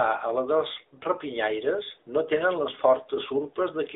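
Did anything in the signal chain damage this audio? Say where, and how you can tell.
Yes, at the codec stage: the speech carries AMR narrowband mobile codec damage throughout, band-limited to roughly 300 Hz to 3.7 kHz, with a plainly audible buzzy, synthetic edge. That points to a mid-rate AMR-NB mode near 10.2 kbps, not a simple telephone-line filter, which would dull the sound without that vocoder colouring.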